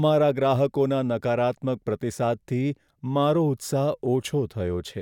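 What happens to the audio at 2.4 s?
Nothing goes wrong at 2.4 s; the speech carries on intact there, with no dropout, click or distortion.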